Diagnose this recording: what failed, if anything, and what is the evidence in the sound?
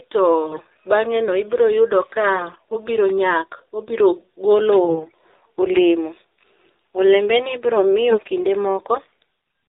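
The whole clip has gone through the AMR narrowband mobile codec, so this is a codec-stage fault. Nothing above 4 kHz survives, and the speech has that buzzy, synthetic edge you get when a vocal-tract model is rebuilt from a handful of excitation pulses per subframe. The damage is plainly audible, which points to one of the lower AMR-NB modes, something around 7.4 kbps.

On top of that there are AMR bit errors from the network side, in four bursts: 0.44–0.61 s, 2.36–2.77 s, 4.85–5.12 s and 8.10–8.29 s. In each one the voice holds roughly its pitch and level but turns hoarse, scratchy and gargly. That's a weak radio link flipping a few percent of the less-protected bits while the checksum on the important bits still passes, so the pulse positions and the fine gain and spectrum values get decoded wrong.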